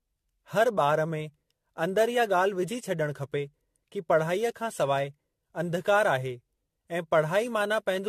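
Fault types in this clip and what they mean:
Generation loss: the speech has a swirly, hollow, smeared quality and soft, blurred consonant attacks, with nothing above 14.1 kHz. It sounds like the likely result of around seven rounds of lossy re-encoding, consistent with an AAC-LC chain at 64 kbit/s.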